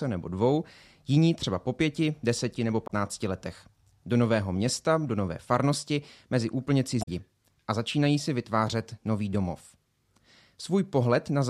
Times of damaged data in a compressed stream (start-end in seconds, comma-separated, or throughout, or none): 2.84-2.91, 6.99-7.08